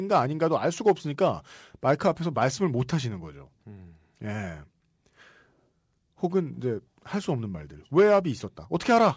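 Speech, with no technical faults heard in this clip.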